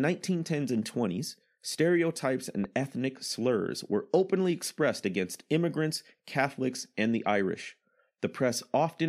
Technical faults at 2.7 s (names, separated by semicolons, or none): loud pop